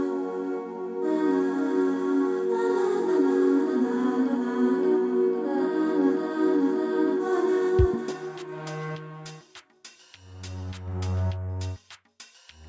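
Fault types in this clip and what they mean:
Nothing stood out on listening to this clip.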